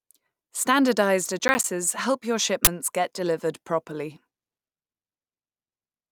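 Processor overload crackle runs from 1.39 to 1.64 s, just before "help your". The processor is falling behind its audio deadlines. Several small buffers in a row are not filled in time, and each one plays as a short hole of silence with abrupt edges. The gaps are spaced like buffers of around ten milliseconds, with about five missed across the stretch. Together they come across as a quick gritty crackle laid over the speech. It clears once the load eases.

An uninitialised buffer sounds at 2.65 to 2.67 s, between "help your" and "get delivered properly". One block was sent to the output before any audio had been written into it. The converter played whatever data was left in that memory. The result is a 23 ms burst of harsh, loud digital noise that has no relation to the surrounding speech. Its length fits a single 1024-sample block.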